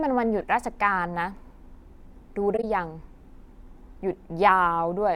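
From 2.54 to 2.64 s, a corrupt frame was concealed: the decoder detected damaged AAC data and covered roughly 0.1 s, likely several frames.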